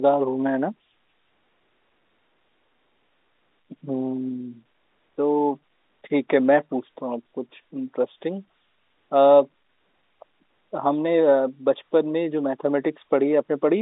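No technical faults are audible.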